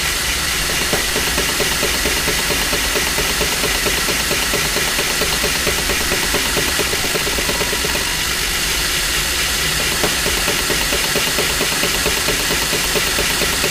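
A recording of everyday sounds, and from 6.82 to 8.62 s there's a time-stretched section: the pace jumps to roughly double speed (about 1.98x) while the pitch holds steady, so it comes across rushed. Likely cause is software squeezing that stretch to fit a length by dropping short slices.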